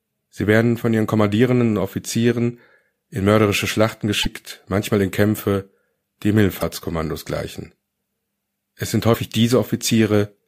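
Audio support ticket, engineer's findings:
Short skips at 4.22–4.26 s, 6.60–6.62 s and 9.13–9.16 s, each one to two 26.1 ms MP3 frames long. Likely a broken MP3 bit reservoir: frames dropped, next frame borrows bytes from the wrong one, so the audio jumps ahead and garbles briefly.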